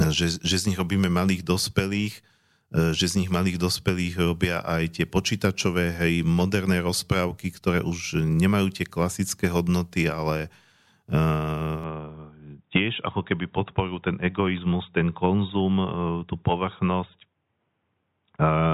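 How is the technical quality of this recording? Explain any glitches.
The recording has one fault. From 11.8 s to the end, the input appears switched to a poorer device. The speech suddenly turns dull and boxy, with nothing above 3.8 kHz. There is no gap at the switch. The level stays about the same. A faint new background noise appears. The likely cause is a change to a narrower-band microphone or headset.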